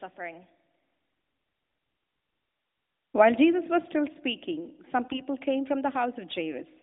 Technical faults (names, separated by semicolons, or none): AMR bit errors